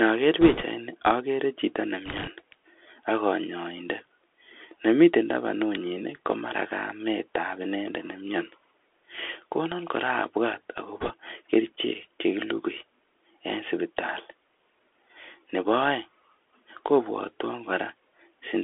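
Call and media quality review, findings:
Narrowband, muffled speech throughout, nothing above about 3.4 kHz and thin below 300 Hz. Scratchy s sounds, grainy hiss under the speech, harshness on loud bright passages. Probable component: Bluetooth CVSD headset codec. The one-bit-per-sample up/down stepping, which fits a 64 kbps CVSD stream, can't track fast high-frequency swings, so loud content overloads the slope and quiet stretches carry granular noise.

Short bursts of rushing, crackly noise over the speech at 0.41–0.64 s, 2.06–2.29 s and 11.00–11.13 s, without sharp clicks. Probable component: bit errors on a Bluetooth voice link, at an error rate of a few percent. Flipped bits push each step the wrong way, but no single bit counts for much and the error fades quickly, so the damage spreads as crackle rather than pops.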